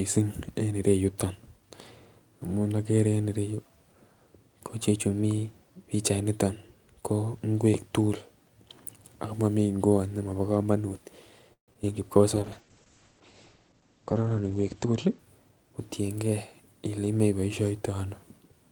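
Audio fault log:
11.53–11.89 s, repeated packet loss (robotic sound): right after "ngwot nemobo komonut", four gaps chop the speech, with the longest about 144 ms, patched by stretching the last sound, so it turns choppy and robotic.
12.22–12.67 s, jitter buffer slow-down: the receiver repeats bits to rebuild its reserve, adding 50 ms, so speech runs at 91% speed, drawn out but same pitch.
12.36–15.24 s, call bitrate drop: bandwidth estimate falls, encoder goes from 40 to 10 kbps and top end drops from 20 kHz to 8 kHz, so speech turns muffled and rough.
14.86–16.31 s, jitter buffer speed-up: the buffer got too full, so small pieces get trimmed, about 150 ms in all, and speech hurries along at 110% with unchanged pitch.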